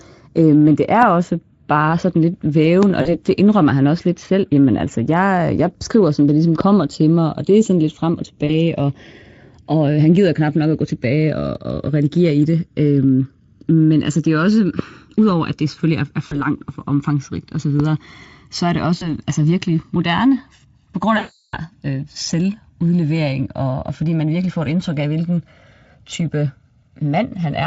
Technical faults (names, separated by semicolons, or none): channels drifting apart; loud pop; VoIP packet loss concealed by the speech codec